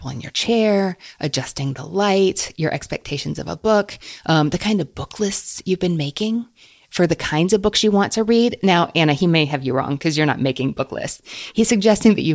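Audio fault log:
Nothing stood out on listening to this speech recording.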